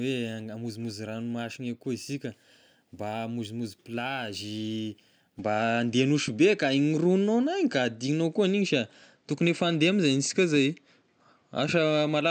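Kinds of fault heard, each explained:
Input switched to a poorer device: At 5.39 s the speech abruptly turns duller, with nothing above 8.2 kHz. The level shifts by around 5 dB, and a faint new noise floor appears. No gap marks the change. It is likely a switch to a lesser microphone.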